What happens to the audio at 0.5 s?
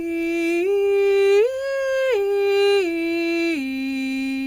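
Nothing goes wrong at 0.5 s; the music plays through that moment intact, with no dropout, click or distortion.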